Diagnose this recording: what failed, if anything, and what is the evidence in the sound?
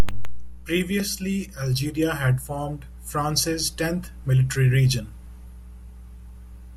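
The analogue wiring stage failed: mains hum runs through the whole speech recording as a steady 60 Hz tone, roughly 20 dB below the speech. A ground loop or nearby transformer couples power-line current into the signal. On a spectrogram it is an unbroken horizontal line at 60 Hz.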